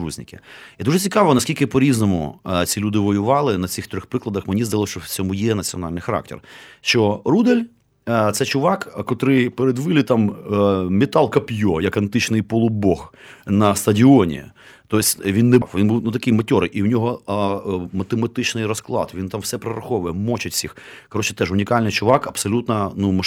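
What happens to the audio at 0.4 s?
Nothing goes wrong at 0.4 s; the speech plays through that moment intact, with no dropout, click or distortion.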